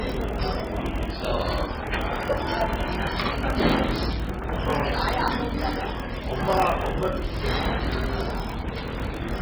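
A clip of everyday sounds, with two problems running the whole way through. It sounds watery and swirly, likely heavy MP3 compression at a very low bitrate, around 16 kbps. There's also a steady 41.7 Hz buzz and everything plays slow at 0.889x with the pitch about unchanged. That's a block size mismatch (padded): short blocks are filled out with silence, which fits 1024-sample writes being read as 1152-sample blocks.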